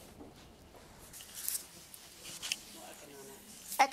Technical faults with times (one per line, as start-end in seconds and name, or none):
1.13-3.92 pre-emphasis left on